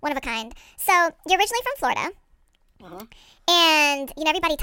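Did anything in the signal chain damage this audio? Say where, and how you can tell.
Yes, a wrong sample rate at playback: the speech runs 1.5 times fast and about 7 semitones high throughout, which fits 32 kHz material played at 48 kHz.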